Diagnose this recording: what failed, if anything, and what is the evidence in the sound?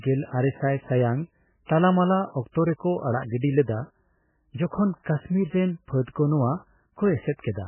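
Throughout the speech the sound is dull and watery, with nothing above 3 kHz and a swirling, unstable texture. At the codec stage, this is likely heavy MP3 compression at a bitrate near 8 kbps: the encoder cuts the treble and zeroes weak frequency lines that flicker between frames.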